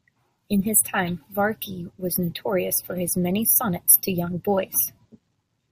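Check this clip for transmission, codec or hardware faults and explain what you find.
Nothing in this speech recording stood out as a problem on listening.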